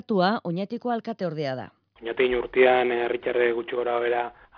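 No technical faults can be heard anywhere in the recording, and the signal stays steady and intact throughout.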